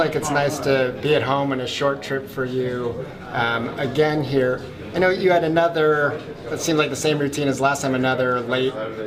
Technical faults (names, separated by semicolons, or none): none